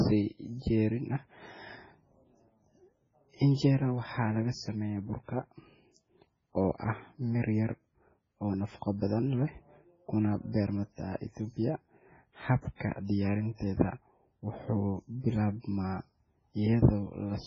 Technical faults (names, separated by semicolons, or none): MP3 compression